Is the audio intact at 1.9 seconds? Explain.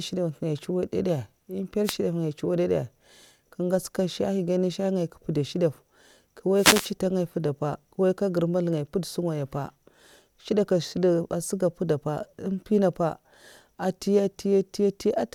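No. From 1.84 to 1.96 s, a span of about 0.12 s, the speech is hit by a wireless microphone noise hit: the FM radio link fades as reflected signals cancel, so receiver hiss surges, heard as a brief swish of static. Unlike a digital dropout, which leaves a gap of silence or a hard glitch, this fault fills the moment with rising noise that washes over the sound rather than removing it.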